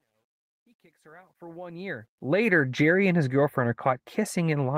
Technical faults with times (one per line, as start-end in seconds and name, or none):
0.00-2.48 truncation distortion on a fade